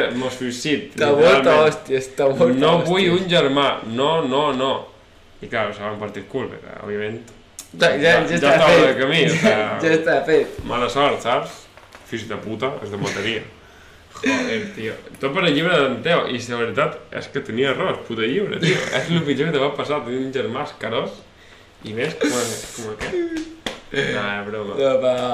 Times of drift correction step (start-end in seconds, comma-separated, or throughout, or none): 11.89-13.98, 16.72-18.93